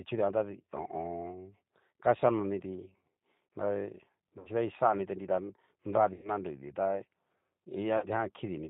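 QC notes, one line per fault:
Throughout: G.729 codec. The whole thing is squeezed through an 8 kbit/s G.729-style coder, so nothing survives above 4 kHz and the top end is dull. Each short frame is rebuilt from a vocal tract filter, a pitch guess and a handful of pulses instead of the real waveform. That's why the speech stays intelligible but comes out rough, grainy and a bit synthetic. The damage is plainly audible.
4.39–4.49 s, 6.14–6.30 s and 7.98–8.06 s: VoIP packet loss concealed by the speech codec. About 60 ms, 100 ms and 40 ms of audio went missing. The decoder filled each hole by repeating its last pitch and filter settings while turning the gain down, so you hear the sound smear into a buzzy tone or coloured noise that fades. The middle gap is the longest. Because each frame leans on the previous one, the speech stays weak and a little off for a moment after each gap before it recovers.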